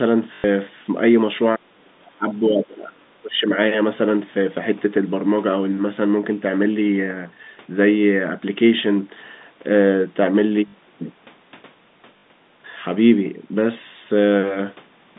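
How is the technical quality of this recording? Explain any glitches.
The recording has two kinds of glitch: short robotic stutters from lost packets, and two stretches early on where the speech sinks sharply in level. All of it comes through the narrow telephone band of G.711 coding.

Packet loss with last packet repeated occurs at 0.34–0.44 s (100 ms), 10.68–10.74 s and 12.18–12.24 s (60 ms each). Missing audio was filled by replaying the previous packet. The durations fit 20 ms packets, so each gap buzzes at about 50 Hz.

Speech suppressed in double talk appears at 1.56–2.27 s, dropping by up to about 35 dB, and at 2.48–3.51 s, dropping by up to about 25 dB. An echo canceller likely mistook overlapping talk for echo and turned the speech down, so it dips.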